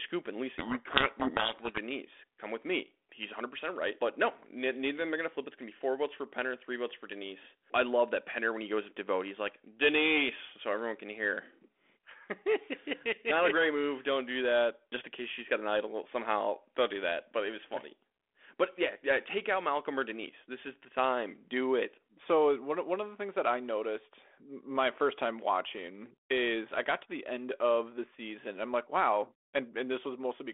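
From 0.58 to 1.79 s the speech is buried in harsh distortion. This is a codec payload misread. The G.726 code words arrive with their bit order reversed, so the decoder rebuilds the wrong differences. The sound stays in the 300 Hz to 3.5 kHz telephone band at 32 kbit/s.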